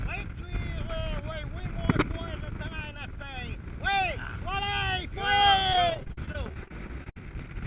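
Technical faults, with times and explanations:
5.73–7.17 s, repeated packet loss (robotic sound): a rapid run of dropouts, the longest about 60 ms, each patched by stretching the last bit of sound. Roughly a quarter of that stretch is filler, hence the choppy sound with pieces missing over the 4 kHz-limited call audio.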